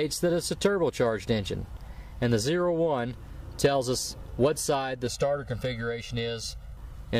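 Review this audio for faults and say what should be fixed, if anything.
Channel delay (comb filtering), 5.07 to 6.77 s: one channel runs roughly 1.5 ms behind the other before the mono sum, so shared content cancels at evenly spaced notches starting near 300 Hz, giving a hollow, phasey colour. Prevent it by checking inter-channel alignment or polarity-correlation before any downmix.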